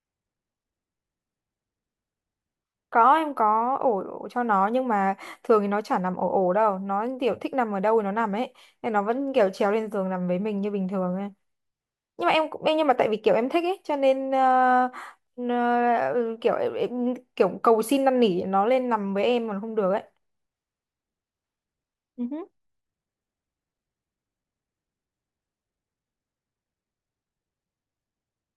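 No technical faults are audible anywhere in the recording.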